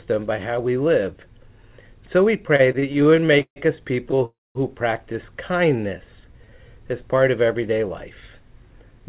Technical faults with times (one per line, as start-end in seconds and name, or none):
2.56-3.58 repeated stalls (stutter)
4.26-4.57 call audio freeze
5.52-6.79 jitter buffer slow-down
8.61-9.01 jitter buffer speed-up